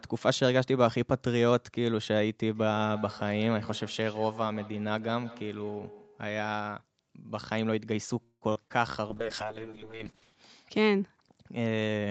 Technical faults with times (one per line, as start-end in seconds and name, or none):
2.55-6.67 feedback echo between two devices
8.23-8.72 repeated packet loss (robotic sound)
9.09-11.20 call bitrate drop